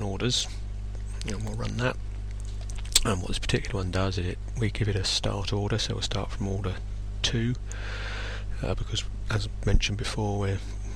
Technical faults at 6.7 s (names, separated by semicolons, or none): none